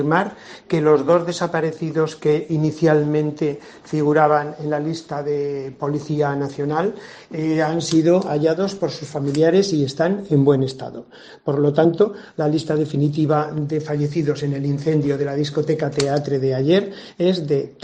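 At 11.84 s there is a brief blip, only about 14 ms long. This is damaged data in a compressed stream. Some bytes in the encoded audio were corrupted. The decoder misread those frames and lost sync. It then had to find the next valid frame header.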